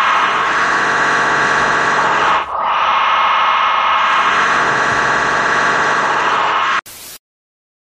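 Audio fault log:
No fault can be heard anywhere in the clip. Nothing calls for a timed entry in this log.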